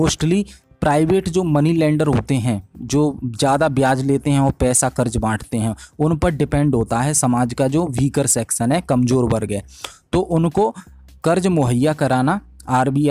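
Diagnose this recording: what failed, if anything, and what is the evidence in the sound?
Hard clipping runs throughout the recording, with the signal driven about 4 dB past the limit of a converter or sample-format stage. Only a small fraction of samples, well under one percent, reach that ceiling, so the peaks are sliced flat and the added high harmonics give brief crackle on loud moments rather than constant fuzz.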